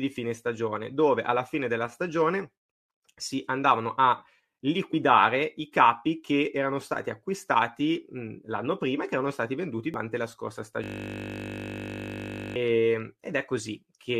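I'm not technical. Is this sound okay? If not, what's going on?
No. At 4.93 s and again from 9.94 to 9.96 s, just after "che erano stati venduti", there are brief glitches from damaged data in a compressed stream. From 10.84 to 12.56 s, after "la scorsa", a system hang loop replays one 20 ms snippet over and over. That makes a steady 50 Hz buzz instead of a quick blip.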